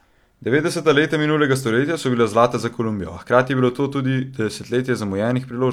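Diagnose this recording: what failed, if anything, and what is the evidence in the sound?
Nothing failed in this recording.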